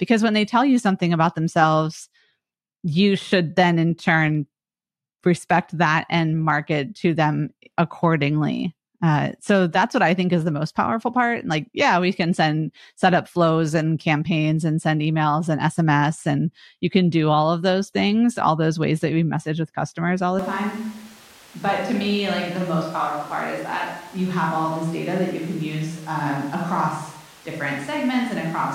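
At 20.39 s, after "with customers all the", the speech abruptly turns roomy and hollow. Bass thins. The level drops about 5 dB. Room noise sits roughly 25 dB below the speech. It lasts to the end. This is likely a switch to a distant microphone.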